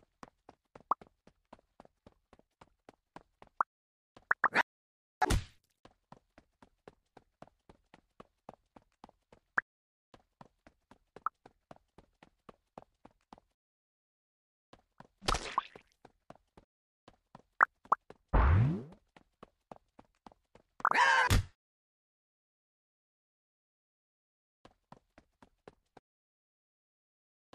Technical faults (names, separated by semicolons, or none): audio dropout to silence